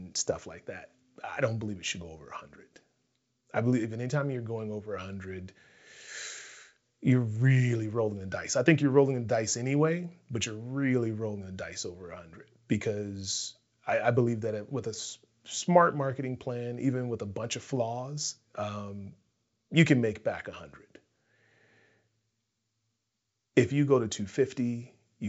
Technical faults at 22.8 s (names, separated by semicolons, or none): none